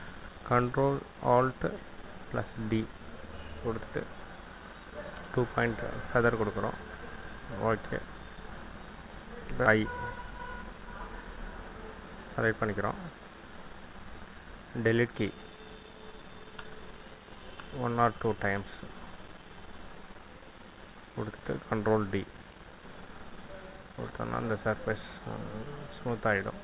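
At 9.66 to 9.68 s a skip ahead occurs: roughly a second of audio was discarded, likely by an overfull jitter buffer, and the two sides are butted together with no fill. It sounds like an abrupt jump; the waveform and spectrogram show a hard seam with no silent gap.

From 11.61 to 13.22 s a jitter buffer speed-up plays the audio at about 109% speed, trimming around 150 ms in total by removing individual pitch periods. It sounds hurried but not higher. On the spectrogram, harmonic spacing stays constant while events compress in time. Above this, the band stops at 4 kHz, which fits the G.711 call codec.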